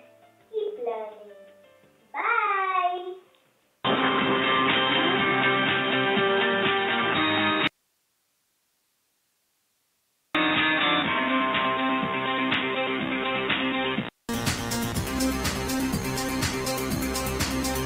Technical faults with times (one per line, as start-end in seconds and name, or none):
0.00-14.29 input switched to a poorer device
7.67-10.35 audio dropout to a faint residue
15.11-17.85 adaptive stream at a lower bitrate